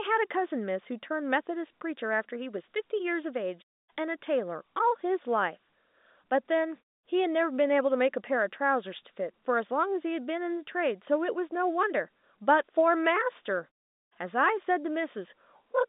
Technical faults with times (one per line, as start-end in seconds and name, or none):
none